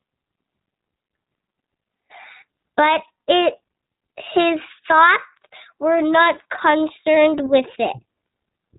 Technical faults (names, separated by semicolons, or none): iLBC codec